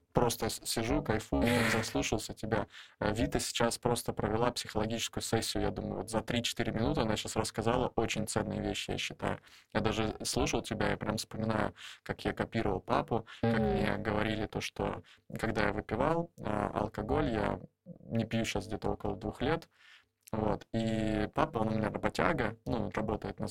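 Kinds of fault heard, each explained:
Overlap-add ripple: The speech was split into windowed frames and rebuilt with an overlap whose windows do not add up to a steady gain. The level swings once per frame, throughout the clip. The swing is very deep, about 60 dB, so the sound nearly vanishes between frame peaks. The ripple runs at around 300 per second. At that rate it is heard as a harsh, buzzy, robotic roughness rather than a slow flutter.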